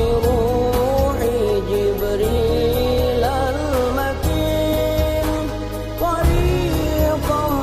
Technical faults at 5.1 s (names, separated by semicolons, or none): none